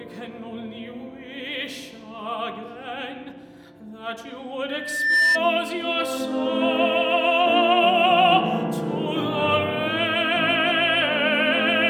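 Loudspeaker feedback squeal from 4.69 to 5.41 s: a microphone is picking up its own loudspeaker, and at 1.8 kHz the loop gain tops unity. That tone swells over about half a second into a squeal roughly 5 dB above the surrounding sound.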